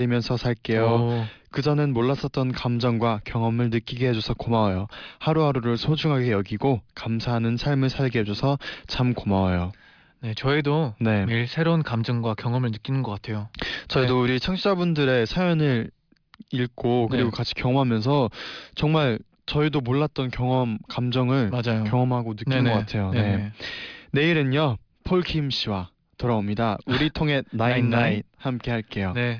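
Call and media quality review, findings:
No audible faults found on the call path for this speech clip; nothing to raise against any component.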